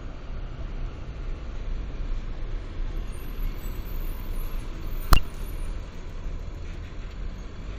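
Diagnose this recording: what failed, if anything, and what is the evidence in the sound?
Compressed frames skipped, at the codec or storage stage: at 0.59 to 0.63 s the sound jumps ahead by roughly 70 ms, and at 7.09 to 7.13 s by about 50 ms. On a spectrogram the texture shifts abruptly at each join.

A bit error spike, from storage or a digital link, appears at 0.86 s as one sharp tick. A flipped bit spanning three samples throws the waveform by a power of two and back. The waveform shows a narrow isolated spike, and the spectrogram a thin full-band vertical line.

A corrupt frame was decoded at the codec stage between 5.12 and 5.18 s, affecting about two frames. Misread gains and codes put energy at wrong frequencies, producing an error that peaks near about −10 dBFS. The spectrogram shows a short block of misplaced, unrelated energy.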